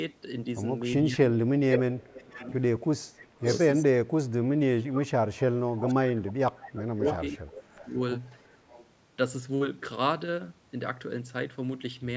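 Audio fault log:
1.05–8.0 s, speech suppressed in double talk: the level dips by about 20 dB at 1.05–1.61 s and 2.14–2.48 s, then by up to about 30 dB across roughly 4 s of 3.07–8.0 s. This is likely an echo canceller attenuating both the near-end talker and far-end echo while both talk.
1.7–3.59 s and 5.8–8.85 s, echo leak: a delayed copy of the speech comes back at 466 ms, about 5 dB below the direct sound, then at 544 ms, about 10 dB below. This is likely residual loudspeaker pickup the echo canceller failed to remove.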